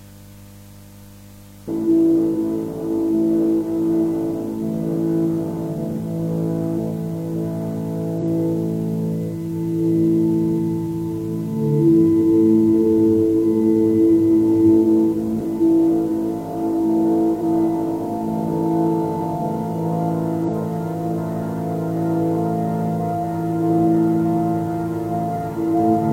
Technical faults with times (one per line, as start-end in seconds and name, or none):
6.74-6.78 compressed frames skipped
8.18-8.23 compressed frames skipped
17.37-17.43 compressed frames skipped
20.44-20.50 compressed frames skipped